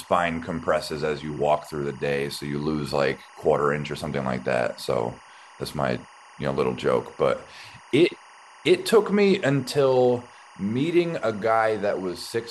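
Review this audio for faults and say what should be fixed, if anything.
Timecode bleed runs through the whole clip. Linear timecode at 23.976 frames per second leaks into the speech as a chirping warble about 25 dB below it, flipping between tones near 1 kHz and 2 kHz. A spectrogram shows two steady horizontal bands there, flickering in a repeating pattern at the frame rate. To prevent it, route timecode on its own shielded cable and track, kept away from the audio lines.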